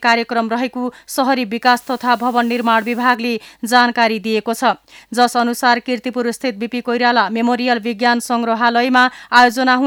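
From 1.65 to 3.15 s the audio shows low bit depth with dither. The signal was requantized to very coarse steps, consistent with 8-bit resolution, and dither spread the rounding error into steady white noise. The result is an even hiss roughly 30 dB below the signal, without distortion.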